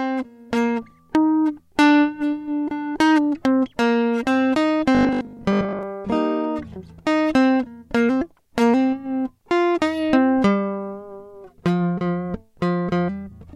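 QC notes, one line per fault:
4.95 to 5.83 s, robotic sound from repeated short buffers: the music goes rigid and metallic, with a fixed 50 Hz buzz laid over it, likely from the playback repeating a 20 ms chunk while fresh audio arrives too slowly, so roughly half the real material is skipped.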